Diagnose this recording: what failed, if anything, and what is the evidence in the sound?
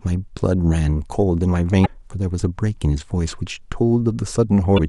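The codec stage failed: damaged data in the compressed stream. You get short glitches at 1.82 to 1.88 s and 4.74 to 4.80 s, each about 60 ms. Corrupted bytes there make the decoder misread those frames and lose sync until it finds the next good header.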